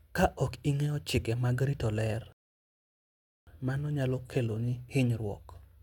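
A rebuffering stall runs from 2.32 s to 3.47 s: the player exhausted its downloaded audio and paused until more arrived. The speech drops to silence, then picks up exactly where it left off, with nothing missing but about 1.15 s added.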